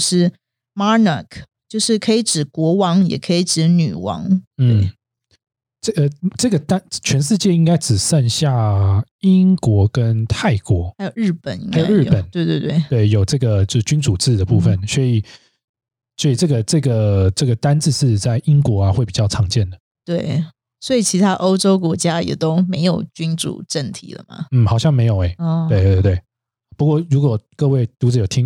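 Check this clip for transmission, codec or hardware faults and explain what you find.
The speech signal arrives intact, with continuous level, stable timing and full bandwidth, and nothing in it points to trouble in transmission, encoding or the recording hardware.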